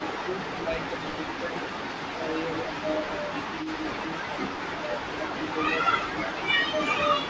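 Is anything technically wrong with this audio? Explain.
Yes. Overdone noise removal runs throughout: the suppressor is set too aggressively and cuts bands near its noise estimate, so the background becomes twinkly near-silence.

Speech suppressed in double talk occurs at 0.0–1.76, 2.15–2.29, 2.61–4.33 and 4.69–7.16 s. The echo canceller likely mistook overlapping talk for echo, so the speech dips by about 10 dB, and by about 15 dB in the last stretch.

Echo leak occurs at 1.35–2.12, 3.16–3.68, 4.23–5.35 and 6.83–6.90 s. Residual loudspeaker pickup likely slipped past the canceller, returning a 318 ms delayed copy about 20 dB down, and about 15 dB down at 6.83 s.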